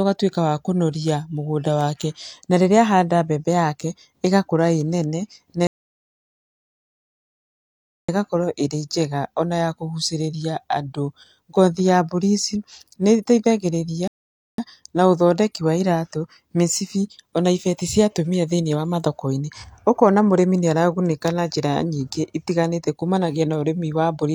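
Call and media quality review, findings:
Rebuffering stall, speech track: silence 5.67–8.09 s (about 2.4 s) and 14.08–14.58 s (about 0.5 s). Playback resumes exactly where it cut, nothing dropped, time added. Player buffer underrun: downloaded audio exhausted, playout paused until delivery caught up.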